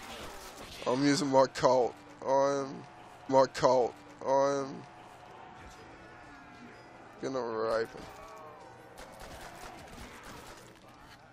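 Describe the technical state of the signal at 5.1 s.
A stream segment repeated from 3.29 to 5.28 s: the player queued the same chunk twice, so about two seconds replay after a small blip at the jump back.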